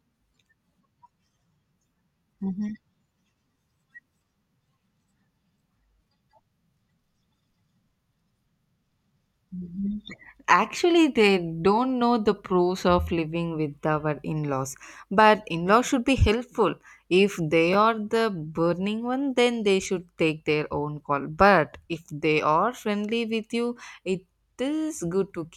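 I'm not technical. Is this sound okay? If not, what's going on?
No. At 17.73 to 17.75 seconds there are chunks out of order. The speech is cut into tiny 10-millisecond pieces as it's handled, and one piece arrived a step late, so it played just after the piece that should follow it. Nothing goes missing, but those two pieces swap places. That creates three abrupt joins, heard as a brief jumbled flicker.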